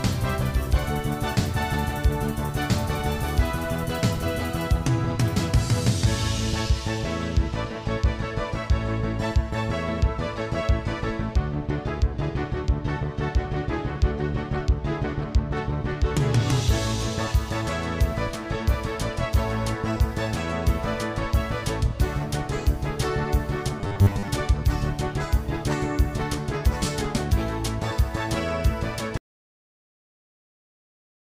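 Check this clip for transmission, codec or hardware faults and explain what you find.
Two faults turn up, both toward the end.

From 23.79 to 24.28 s there's robotic sound from repeated short buffers: a rigid 100 Hz buzz, likely from re-playing 10 ms chunks, with about half the audio repeated.

At 29.17 s there's an audio dropout to silence lasting to the end: dead silence, likely from a lost input or link, with no room tone at all.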